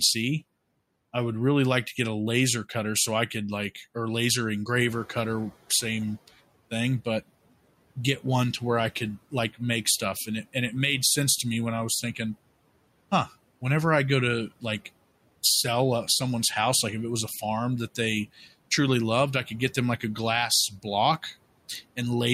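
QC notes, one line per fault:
4.74–5.57 s, noise suppressor catching up. Room noise jumps about 12 dB after "could like or laser". The suppressor's noise estimate lags, so the noise leaks through with less reduction. Over 830 ms the estimate adapts and the noise sinks about 11 dB before "same thing but".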